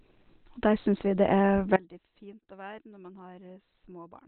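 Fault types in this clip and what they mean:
Opus compression: A low-rate Opus encode in its narrowband speech mode, likely around 12 kbps, leaves the speech muffled, hoarse and heavily damaged, with nothing above 4.2 kHz.
audio dropout to a faint residue: The wanted signal was likely lost while the path stayed live; from 1.77 s to the end the speech cuts abruptly to a faint residue, roughly 25 dB down.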